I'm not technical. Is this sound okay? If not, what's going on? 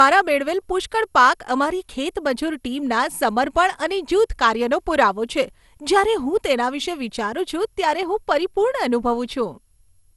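No. The speech has generation loss from start to finish: it sounds swirly, hollow and smeared, and the starts of sounds are blurred rather than crisp. Nothing comes through above about 12 kHz, so the top end is dull. The likely cause is the recording being compressed with an MP2-style codec, decoded and compressed again about seven times. Each round adds its own small errors, and they pile up into this washed-out texture.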